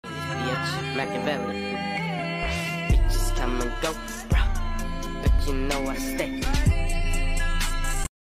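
No technical faults are audible.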